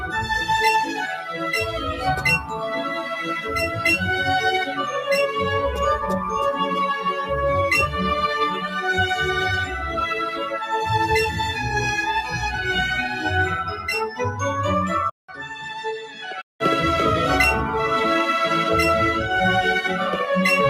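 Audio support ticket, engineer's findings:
Noise suppressor applied to music or sounds, whole clip. Level keeps wobbling by about 5 dB as a speech-tuned denoiser reads sustained content and ambience as noise and rides it down. Attacks pass, held material sinks. Probable component: the noise-suppression stage.

Sound cut by the noise suppressor at 1.16–1.42, 2.42–2.67, 2.89–3.85, 10.3–10.56, 15.28–15.71 and 16.02–16.27 s. Drops of about 7 to 9 dB, deepest at 15.28–15.71. The same suppressor is clamping harder on steady or decaying stretches, so they dip or get cut short.

Input switched to a poorer device, 15.10–16.60 s. There's a 0.19 s gap at the switch, then level down about 5 dB with a different noise floor, roughly 55 dB under the signal. The likely cause is the capture path hopping to another mic or a headset call profile, with a narrower band and its own tone.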